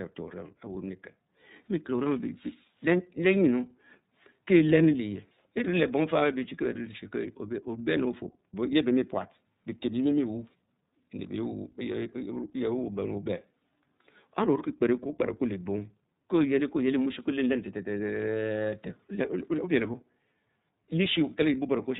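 From start to finish the speech has gone through the iLBC codec, and the damage is plainly audible. Everything above 4 kHz is gone, so it sounds boxed-in and telephone-like. Each chunk of the signal is coded on its own, with no help from the previous one, and that leaves the voice a bit rough and synthetic. The texture points to iLBC's 30 ms frame mode, which fits roughly 13.33 kbps.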